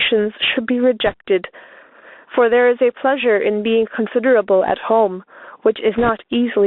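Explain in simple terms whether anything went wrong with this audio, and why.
Gain pumping, throughout the clip: loud and soft parts end up closer in level, and the sound is squashed. The likely cause is a microphone level set far too high, with an automatic limiter pulling the level down hard on each loud sound.

Bluetooth CVSD headset codec, throughout: the speech sounds thin and phone-like, with nothing below about 250 Hz or above about 3.6 kHz. This headset format stores the sound as a stream of tiny up-or-down steps, which leaves a grainy hiss and makes s sounds scratchy.

Bit errors on a Bluetooth voice link, from 1.06 to 1.14 s and again from 5.98 to 6.09 s: short bursts of rushing, crackly noise sit over the speech. Some of the wireless data was scrambled in transit, and the second burst sounds rougher than the first.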